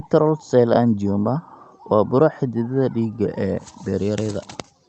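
No technical faults turn up anywhere in the speech. It has clearly been carried over a call path, with the top end stopping at about 8 kHz and a coding texture that fits an Opus stream at around 32 kbps.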